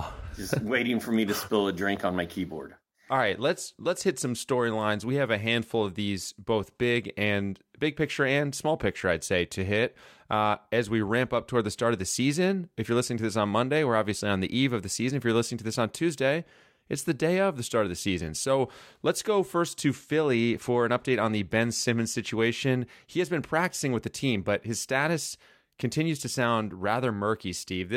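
No technical faults can be heard anywhere in the recording, and the speech signal stays intact and continuous throughout.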